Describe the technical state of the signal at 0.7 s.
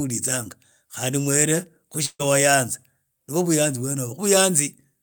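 At 0.7 s the speech signal is intact, with no audible technical fault at that moment.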